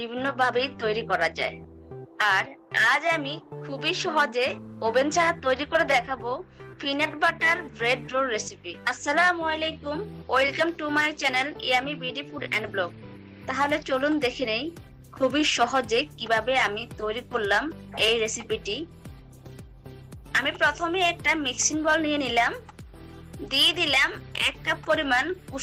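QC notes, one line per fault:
No faults found in this clip. Nothing in the audio called for a QC entry.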